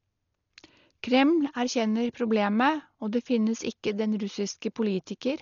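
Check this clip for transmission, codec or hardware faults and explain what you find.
The speech is heavily codec-damaged throughout, likely from Dolby Digital compression at a bitrate near 40 kbps. Nothing remains above 7 kHz, and starved bands are refilled with noise, so tones sound dull and fluttering, unlike plain low-pass dullness.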